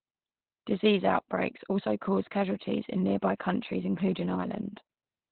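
Opus voice compression runs throughout the speech, heavy enough to suggest a bitrate near 8 kbps. The SILK linear-prediction coder runs narrowband, discarding everything above 4.2 kHz and coding the excitation coarsely, so the speech sounds muffled, hoarse and faintly robotic.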